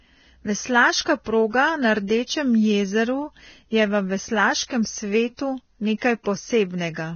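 Vorbis compression throughout: a hard cut-off at 6.5 kHz and grainy, hissy treble, likely from heavy low-bitrate Vorbis coding, consistent with roughly 18 kbps.

Pre-echo at 1.24–1.26, 2.07–2.10, 5.37–5.39, 5.98–6.02 and 6.23–6.26 s: short hiss of 21 to 36 ms before each sharp onset, where block-wide quantisation noise fills the quiet lead-in and softens the attack.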